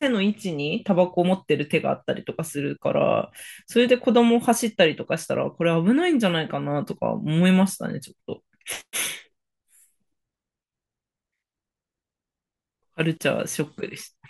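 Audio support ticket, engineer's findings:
No faults found on listening: the speech signal is continuous and stable throughout, with nothing audible that points to a defect in capture, processing or playback.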